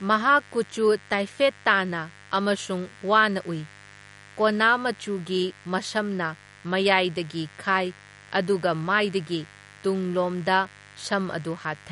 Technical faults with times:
0.00-11.92 mains buzz
0.00-11.92 MP3 compression

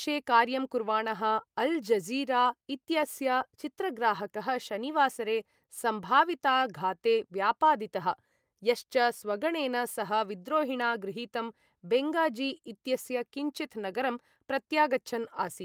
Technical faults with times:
none

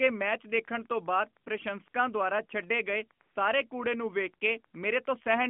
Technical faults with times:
1.44-1.46 AMR comfort noise
1.90-1.94 AMR comfort noise
3.22-3.36 AMR comfort noise

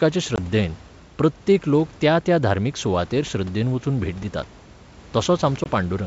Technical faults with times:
0.36-0.39 packet loss on an ADPCM call
5.64-5.68 packet loss on an ADPCM call

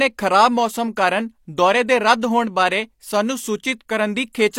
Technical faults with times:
0.96 pre-echo
2.21 pre-echo
3.88 pre-echo

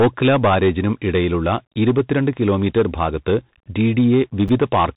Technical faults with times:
0.00-4.96 hard clipping
4.48 chunks out of order

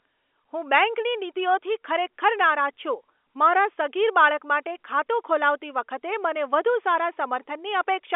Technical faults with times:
none

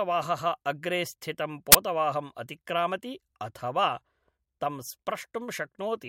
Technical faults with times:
1.72-1.75 file tags played as audio

